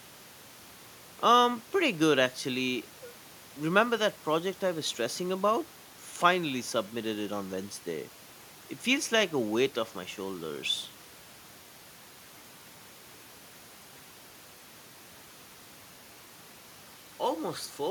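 No technical faults are audible.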